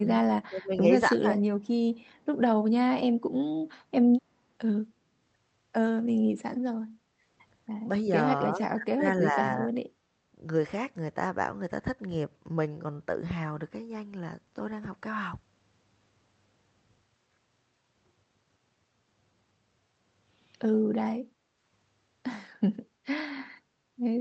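Right from the start the speech keeps ducking: at 0.0–0.11 s, 0.48–0.83 s and 1.19–1.4 s it sinks by roughly 15 to 25 dB, in short bites. That's most likely speech suppressed in double talk, with the echo canceller squashing the near talker while the far end is speaking.

At 2.15–2.25 s there's a faint ghost of the voice trailing about 274 ms behind, way down, around 40 dB under the speech. That's likely an echo leak, where a bit of loudspeaker sound slipped past the canceller and came back.

Then the room tone itself drops out at 3.18–3.3 s, by about 17 dB, and again at 6.79–7.24 s, by about 13 dB, before springing back. That's background gated by the echo canceller, clamping the mic hard while the loudspeaker plays.

Later the ducking on the speech returns at 8.51–9.05 s and 9.22–9.74 s, with dips of roughly 25 dB and 15 dB. It's the same double-talk suppression pattern: the voice dips while the other side talks.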